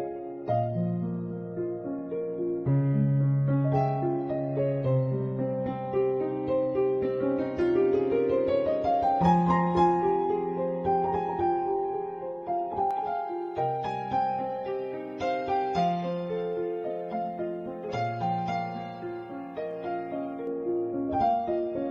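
From 12.91 to 20.47 s there's pre-emphasis left on: the treble boost, which fits a J.17 curve, was never undone, leaving highs about 11 dB hot at 10 kHz, so it's thin, bright and hissy.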